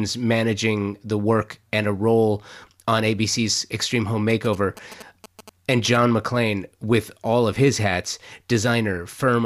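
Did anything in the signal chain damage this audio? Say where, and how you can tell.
Yes. From 4.30 to 5.97 s the speech picks up GSM signalling bursts, an interference fault in the analogue wiring. You hear a galloping dit-dit-dit of short buzzes, sitting roughly 15 dB below the speech. The buzz repeats at about 217 Hz, which is the GSM frame rate. A nearby 2G phone was sending short bursts of radio traffic. An analogue stage rectified that RF and turned its on-off envelope into sound.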